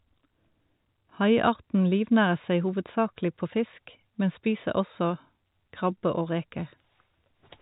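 The speech carries no audible technical faults.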